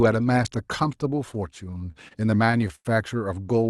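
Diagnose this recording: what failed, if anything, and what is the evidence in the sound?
Repeated stalls (stutter), caused at the network and jitter-buffer stage. Between about 1.71 and 2.87 s, packets arrived late or too slowly, and the buffer ran dry eleven times. Each time, the receiver held the last bit of sound until more arrived. The longest hold is around 96 ms, and roughly a fifth of that stretch is concealment filler. Nothing actually drops out, but the speech drags and hiccups through the passage.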